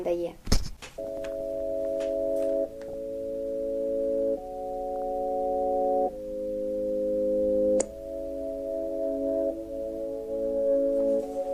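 DAB burbling appears at 1.04 to 1.41 s, 2.83 to 2.94 s and 4.92 to 5.04 s. Weak reception lets a fraction of a percent of bit errors slip past error correction into the MP2 stream. Corrupted samples then put short blips of noise into individual sub-bands, and corrupted scale factors throw sub-bands up or down in level for up to a frame, giving burbling blips over the sound. On a spectrogram this shows as scattered blocky rectangles in narrow bands, while the waveform shows ragged bursts.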